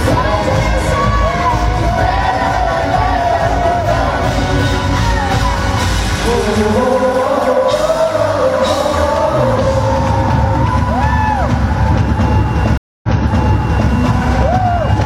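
At 12.77 s a stream reconnect begins: the connection drops, the audio goes silent for 257 ms, and a fresh decoder resumes about 0.88 s earlier, so material repeats through 13.91 s. That replayed stretch separates it from a plain dropout, which simply loses audio.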